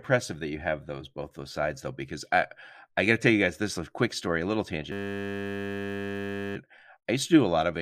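System hang loop in this speech from 4.92 to 6.56 s: after "quick story a little", a frozen driver replays one 10 ms buffer as a steady 100 Hz buzz until "I used to do".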